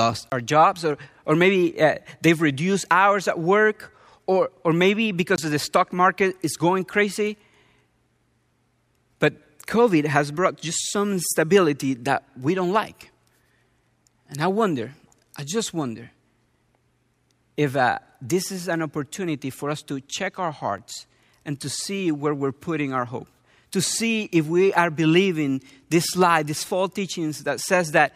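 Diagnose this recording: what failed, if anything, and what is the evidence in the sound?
The output buffer was likely not filled in time, a driver or buffer-stage underrun, so blocks of samples were replaced by zeros. Each block of digital silence cuts in and out with no fade. The 20 ms holes at 0.30–0.32 s, just before "our jobs or or", and 5.36–5.38 s, between "work or or maybe" and "the stock market is", sound like short dropouts. The 5 ms gap at 20.78 s, after "us to check our", is a single tick.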